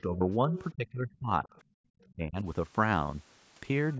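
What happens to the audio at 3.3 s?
At 3.3 s the speech carries on intact, with only the normal limits of call microphone processing, which trims the lowest bass and leaves nothing above 8 kHz.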